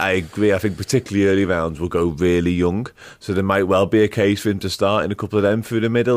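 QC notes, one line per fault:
Nothing stood out on listening.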